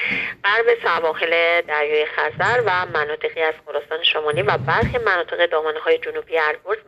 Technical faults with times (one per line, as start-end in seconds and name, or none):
none